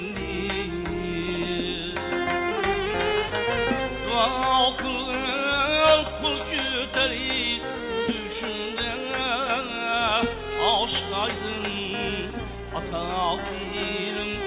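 No technical faults can be heard anywhere here.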